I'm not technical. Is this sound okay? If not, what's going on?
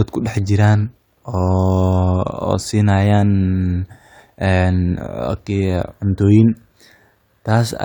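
Yes, this recording sounds fine; nothing is wrong here.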